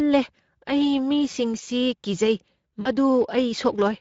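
Throughout the speech, the Speex codec leaves plainly audible damage: a hoarse, grainy roughness on voiced sound, which fits a low-quality setting near 16.8 kbps. The CELP coder has too few bits to model the excitation, so it approximates the buzz of the voice with noisy pulses. On a spectrogram the harmonics look smeared and broken up, with noise filling the gaps between them. The waveform looks fuzzier than natural speech, with less sharply defined pitch periods.

From 2.81 to 2.89 s, VoIP packet loss concealed by the speech codec takes over. About 40 ms of audio went missing, consistent with two 20 ms frames. The decoder filled the gap by repeating its last pitch and filter settings at falling gain, so the sound stretches into a brief buzzy tone or coloured noise that fades. On a spectrogram this appears as a flat, unchanging stretch that dims. The waveform shows a repeated pattern shrinking in amplitude, with weak, rebuilding sound just after 2.89 s.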